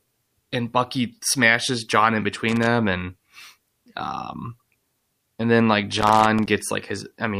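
At 2.48 s the speech is hit by loose connector crackle lasting to 2.67 s. It returns from 5.98 to 6.47 s. A worn or dirty contact makes and breaks as it shifts. The signal chops in and out, giving irregular scratchy bursts.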